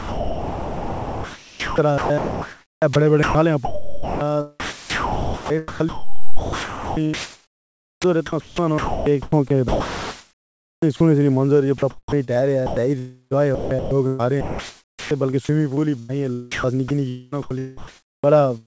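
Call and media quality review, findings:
Sound chopped by the voice detector, 0.0–11.0 s, 11.78–16.11 s, 16.52–18.33 s: choppy speech, gaps filled with synthetic comfort noise (about 8.1 s, 2.0 s, 0.9 s replaced). Likely sender VAD gating too aggressively; G.722 path band-limited at 8 kHz.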